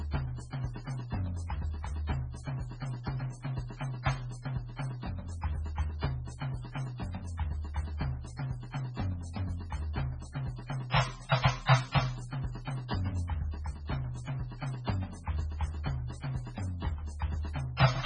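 Throughout the music, nothing sounds above 10 kHz. It is watery and swirly, with smeared attacks. Heavy MP3 compression at a low bitrate is likely.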